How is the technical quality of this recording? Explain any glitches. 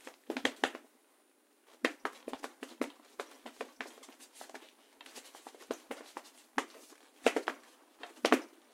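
No technical glitches can be heard in this recording. The sound comes through steady and uninterrupted, with nothing that calls for explanation.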